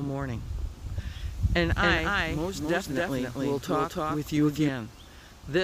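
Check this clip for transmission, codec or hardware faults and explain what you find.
One fault stands out: a doubled audio track from 1.71 s to 4.69 s. Every sound repeats around 300 ms later at about the same loudness, full-band and with no decay, and the copy switches on and off abruptly. The likely cause is a second, slower capture path mixed in alongside the direct one.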